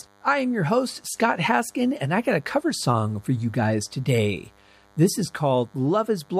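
A thin, steady buzz at 100 Hz with many harmonics sits well below the speech throughout. That's DECT cordless phone buzz, from short radio bursts every 10 ms being rectified.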